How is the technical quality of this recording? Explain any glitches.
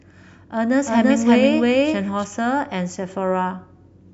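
The recording has one glitch, a doubled audio track.

From 0.86 to 2.24 s a second copy of the speech runs about 300 ms behind and at roughly equal loudness, likely because a slower capture path was mixed back in. The echo is dry and full-band, with no reverb tail, and it cuts in and out abruptly.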